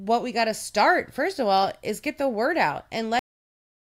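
A speech clip that stops abruptly at 3.19 s, just after "get the word out", dropping straight to digital silence with no decay: a cut-off end, where the final buffers were never written or played.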